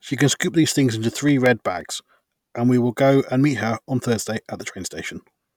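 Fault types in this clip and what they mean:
CD scratch ticks: Six short, regular ticks land in the speech between 0.94 and 1.81 s, about seven a second, the longest only about 2 milliseconds, like tiny clicks or momentary gaps. A scratch or blemish on the disc ruins more data than the error correction can rebuild, once per revolution, so the player patches or mutes those few samples each time that spot passes the laser.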